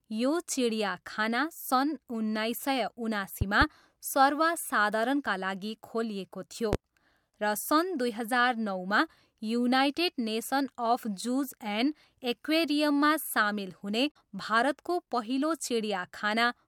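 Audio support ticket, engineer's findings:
Loud pop at 3.41–3.65 s, just after "चिडियाखाना सन् उन्नाइस सय": two sharp pops about 10 dB above the speech. A third, single pop at 6.73–6.76 s peaks near 15 dB. Speech continues underneath each. Likely cause is a voltage step from a connector, switch or static discharge.

Damaged data in the compressed stream at 14.08–14.16 s, between "एक्वेरियममा सामेल हुने" and "भारतको पहिलो": a brief disruption as the decoder loses frame sync and resyncs.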